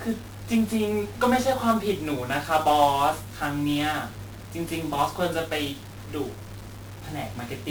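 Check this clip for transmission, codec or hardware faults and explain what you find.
One codec fault runs through the whole speech clip: 1-bit DFPWM compression from start to end. Each sample carries a single bit that nudges an adaptive level up or down, so coarse tracking leaves heavy broadband quantisation noise. The speech sounds fuzzy and crackly, with the treble dulled or replaced by hiss, and the damage is heavy, consistent with a stream of around 48 kbps.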